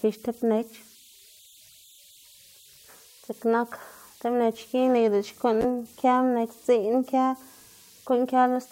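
Throughout the speech, converter idle tones sit beneath the signal. Without dither, the delta-sigma converter locks into repeating bit patterns whenever its input gets small, and those patterns produce a faint whistle around 4 kHz in the pauses, turning grainy under quieter passages, at about 31 dB below the signal. On a spectrogram this shows as a thin horizontal line near 4 kHz persisting through gaps, while the waveform's near-silent stretches never settle to a flat trace.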